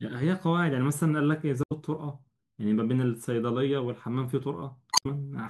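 A short glitch cuts into the speech from 1.62 to 1.72 s, and a longer one follows from 4.89 to 5.06 s. Both are damaged data in a compressed stream. Some of the encoded bytes were corrupted, so the decoder misread those frames and lost its place until it found the next valid frame header, turning about 0.09 s and then about 0.17 s into brief glitches.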